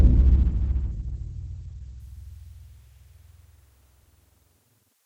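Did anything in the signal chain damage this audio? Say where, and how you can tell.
Yes, at the playback stage: an adaptive stream starting at a low bitrate. From 0.0 to 2.0 s nothing exists above 8.6 kHz and codec artefacts are stronger, which fits a very low-bitrate Opus tier. Quality then jumps with no gap, consistent with a switch up to a higher-bitrate version once throughput was measured.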